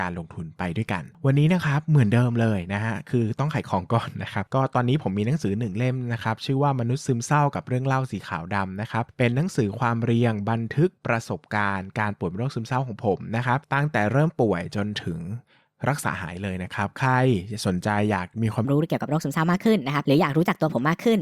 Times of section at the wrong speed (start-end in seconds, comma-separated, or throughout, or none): 18.65-21.22